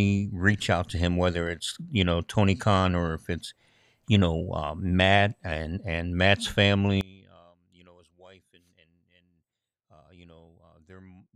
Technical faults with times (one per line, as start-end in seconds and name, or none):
7.01-11.35 one channel inverted